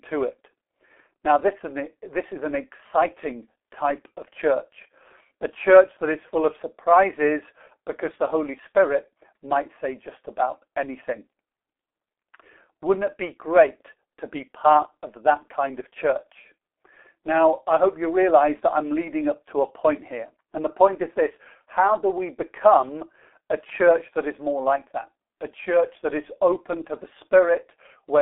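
From start to finish the speech sounds muffled and hoarse, with smeared consonants and a boxy, telephone-like thinness: there is no energy below about 300 Hz or above 3.6 kHz, and nothing at all past 3.8 kHz. This is heavy G.723.1 codec damage. The coder works in long 30 ms frames and refreshes its model of the voice slowly, so fast articulation blurs, and the coarse texture fits a very low bitrate of roughly 6 kbit/s.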